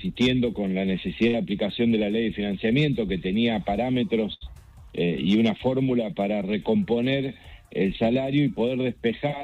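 A burst of packet loss hits at 1.27 to 1.35 s and again at 4.33 to 4.43 s. The receiver stretches the last sound for about 60 ms, then 74 ms, fading it down, and resumes with roughly 60 and 80 ms missing. Unlike a plain dropout, the gap is a held, fading sound before a skip, not silence.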